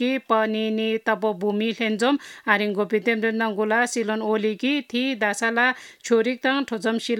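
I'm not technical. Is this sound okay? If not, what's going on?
Yes, it's fine: nothing in it stands out as a problem, so you can relax about this one.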